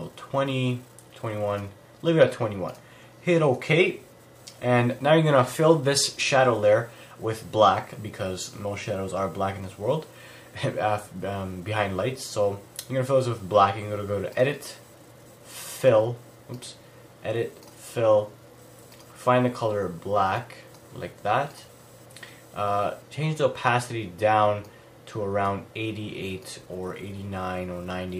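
No technical fault can be heard anywhere in the recording; the signal stays steady and intact throughout.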